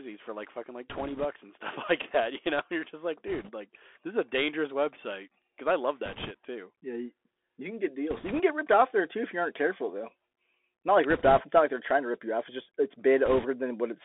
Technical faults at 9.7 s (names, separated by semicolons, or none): Bluetooth CVSD headset codec